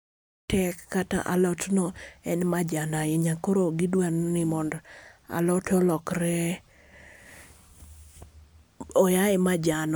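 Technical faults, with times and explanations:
No technical faults can be heard in this speech.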